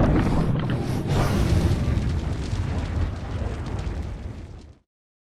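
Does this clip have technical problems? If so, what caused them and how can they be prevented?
No, no technical problems can be heard anywhere in this clip. With nothing gone wrong, there is no cause to trace and nothing that needs preventing.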